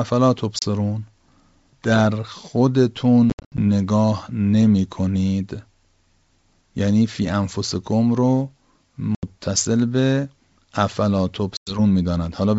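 Packet loss on an ADPCM call leaves hard silent gaps at 0.59, 3.3, 9.15 and 11.57 s. The decoder loses step, so speech returns with brief distortion.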